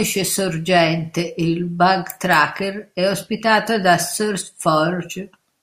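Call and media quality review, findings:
Nothing stood out on listening to this speech recording.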